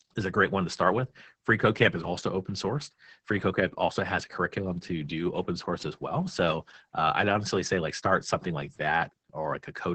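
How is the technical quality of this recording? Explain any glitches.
The speech in this recording has passed through Opus voice compression, and the damage runs through the whole clip. The codec is working in its SILK linear-prediction mode at a very low rate, with the sound pointing to roughly 10 kbps. It limits the band to wideband, cutting everything above 8 kHz, and codes the excitation coarsely. The result is heavy: the speech sounds muffled, hoarse and slightly robotic, with sibilants dulled.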